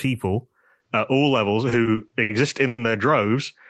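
Input switched to a poorer device at 0.8 s, likely: from there the speech turns duller, with no gap at the switch and faint new noise about 55 dB down. Repeated stalls (stutter) follow between 1.69 and 2.31 s: five late-packet waits, none longer than 60 ms, are bridged by stretching the last sound, so the speech drags without losing anything. A call audio freeze from 2.67 to 2.80 s, likely from a network hold-up, stretches the last sound for 110 ms before the speech resumes where it stopped.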